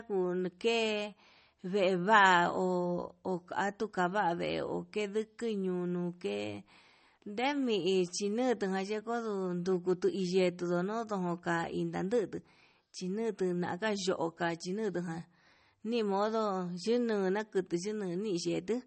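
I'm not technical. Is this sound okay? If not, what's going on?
No, not quite. All the way through, the speech sounds watery and swirly, and there's nothing above about 8.4 kHz, so the crisp top end is missing and s sounds come out dull or metallic. That's likely MP3 compression squeezed down hard: to save space, the encoder throws away the highest frequencies and lets quieter details flicker in and out from moment to moment, which produces that underwater shimmer.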